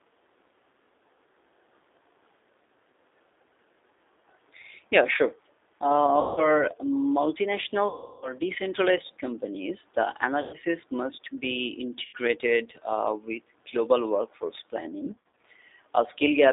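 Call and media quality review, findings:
G.729 codec throughout: narrowband, roughly 300 Hz to 3.7 kHz, rough synthetic timbre from 8 kbit/s pulse-based CELP reconstruction; codec damage plainly audible.

VoIP packet loss concealed by the speech codec at 6.21–6.51, 7.88–8.34, 10.41–10.56, 12.05–12.16 and 15.05–15.37 s (scattered): buzzy or noisy fading extrapolation of last pitch and filter, slow recovery afterwards.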